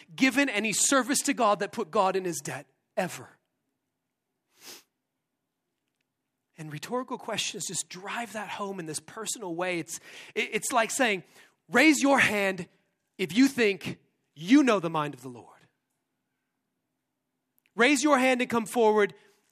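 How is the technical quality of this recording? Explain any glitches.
The technical quality of this recording is sound, with no glitches to explain.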